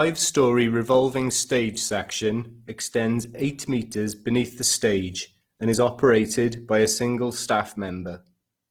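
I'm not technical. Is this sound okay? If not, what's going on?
No, not quite. From start to finish, the speech has a rough, grainy edge, a bit like fine sand mixed into the sound, and the clarity is plainly damaged even though it isn't dull or muffled. That's most likely Opus compression squeezed quite hard. The encoder tries to keep the overall loudness of each slice of the spectrum, and when it runs short of data it fills the gaps with noise or copied material, which gives that gritty texture.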